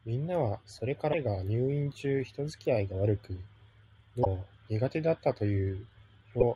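Damaged data in the compressed speech stream makes the decoder misread or reject frames, lose sync and hunt for the next frame header. It happens three times. From 1.09 to 1.14 s, between "それか" and "が入院中", a brief glitch replaces the sound. A similar blip follows from 4.21 to 4.27 s, and a shorter one from 6.40 to 6.43 s. Each lasts only tens of milliseconds.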